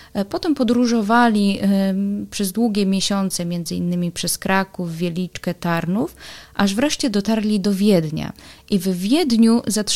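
No dropouts, clicks, distortion or other transmission faults are audible at any point in the signal.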